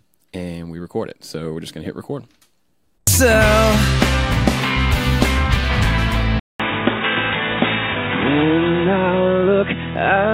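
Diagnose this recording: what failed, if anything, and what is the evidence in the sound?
At 6.40 s the sound drops out for 200 ms, then returns audibly duller and boxier, with nothing above 3.8 kHz through to the end of the clip. A different background noise appears, sitting roughly 45 dB below the signal, while overall level stays about the same. This points to the driver layer, most likely an input switched to a poorer device, such as a second microphone or a headset call profile with a narrower passband.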